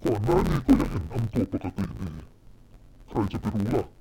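A speech clip in which interleaved audio is read as planar throughout. Each block of about 10.9 ms has its alternating left and right samples split into halves and played side by side at half speed, so the speech keeps its normal pace but sounds dull and robotic, with a buzz at about 92 Hz. Because the blocks are this short, there is no clear octave drop, which separates it from a plain pitch shift or long-block misreads.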